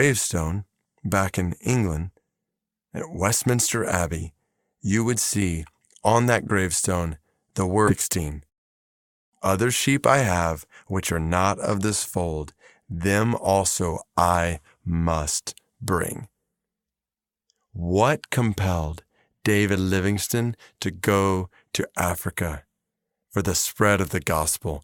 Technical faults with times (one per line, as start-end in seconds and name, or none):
7.87-7.93 stream segment skipped